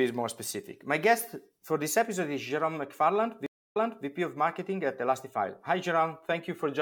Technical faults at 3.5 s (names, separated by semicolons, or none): stream reconnect